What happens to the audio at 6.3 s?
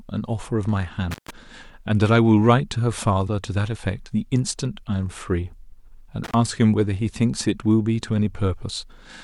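The speech drops out abruptly around 6.24 s, with a brief crackle as it goes and another as it returns at about 6.34 s. In between, roughly 70 ms of the span is simply gone, leaving only a faint hiss. This is an intermittent contact: a loose cable or plug briefly lost its connection, so the signal path opened and then closed again, with the scraping contact producing the crackles at each edge.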